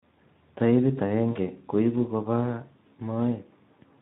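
Speex codec damage runs through the whole of this speech recording, plainly audible as a hoarse, noisy texture, which fits a low Speex setting of about 11 kbps where the CELP coder has too few bits to model the excitation. VoIP packet loss concealed by the speech codec occurs from 1.31 to 1.39 s: roughly 40 ms of audio, likely two 20 ms frames, is missing, and the decoder repeats its last pitch and filter at falling gain, producing a brief fading smear that recovers only gradually.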